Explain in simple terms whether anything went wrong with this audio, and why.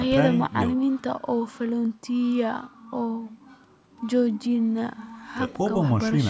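Nothing went wrong here.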